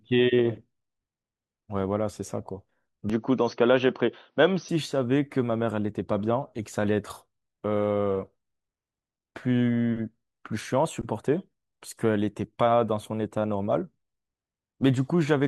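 From 3.10 to 4.69 s the speech goes dull, with nothing above 6.1 kHz at the same level. That's likely the input switched to a poorer device.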